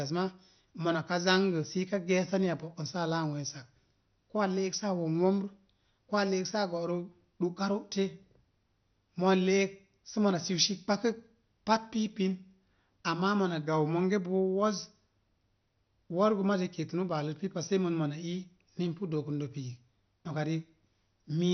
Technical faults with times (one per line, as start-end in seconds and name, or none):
0.00-21.53 MP2 compression